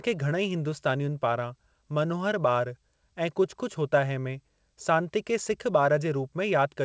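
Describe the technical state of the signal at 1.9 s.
At 1.9 s the speech is intact, carried through the call path with its normal wideband ceiling of 8 kHz and no fault at that moment.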